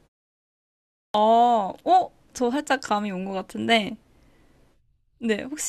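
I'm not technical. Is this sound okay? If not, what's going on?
No. There's a clipped start after a pause at 1.04 s. The speech begins after about a second of silence, and the first tenth of a second or so (roughly 0.1 s, up to 1.14 s) is missing, so the speech jumps in abruptly without its opening sound. This happens when the playback device dozes off during the quiet stretch and needs a moment to wake up, so the beginning of the sound is lost before it's ready again.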